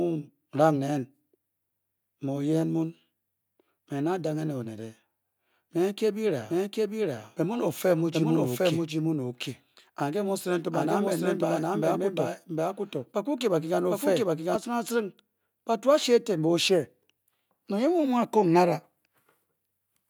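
A slower second capture path likely created a doubled audio track from 6.50 to 14.56 s: an equally loud copy trails about 0.7 s behind, starting abruptly just before "acirinaaring batu ashi eten".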